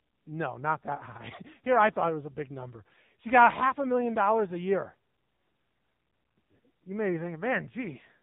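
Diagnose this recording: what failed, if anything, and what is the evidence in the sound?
The failure sits at the codec stage: AMR narrowband mobile codec damage runs through the whole speech clip. Nothing above 4 kHz survives. The voice sounds plainly buzzy and synthetic, which fits a low AMR-NB mode near 8 kbps, where too few pulses drive the vocal-tract model.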